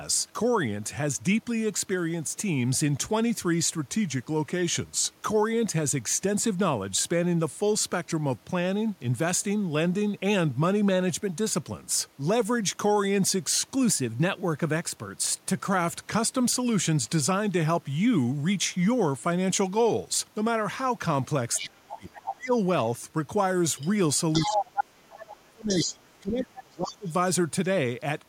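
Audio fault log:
3.75–5.24 s and 13.75–15.66 s, drift correction step: In the first stretch the speech slows by 6.22% and drops about 111 cents, a bit over a semitone. In the second it speeds up by 6.22% and rises about 104 cents. Speed and pitch move together, so it sounds like a tape nudge rather than a voice change. That's most likely clock-matching software jumping the playback rate in one step to drain or refill its buffer.
21.56–22.34 s, 23.77–23.89 s, 24.33–24.84 s, 25.68–25.86 s and 26.73–27.12 s, other side's voice leaking through: A second voice breaks in five times as scraps. It's around 10 dB under the main talker in the first and fourth bits, much fainter at the second and fifth (roughly 20 to 25 dB down), and about as loud as the talker at 24.33 s. That's likely the far end's loudspeaker output getting into the microphone past an echo canceller that didn't fully remove it.
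21.6–22.53 s and 24.43–27.08 s, speech suppressed in double talk: While that other voice is coming through, the main talker gets pushed down, dipping up to about 30 dB. Roughly 0.7 s of the first window and about 2 s of the second are affected. With both sides talking at once, the echo canceller likely couldn't separate its own talker from the loudspeaker echo, so it turned everything down.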